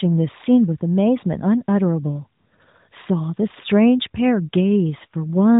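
No technical faults are audible.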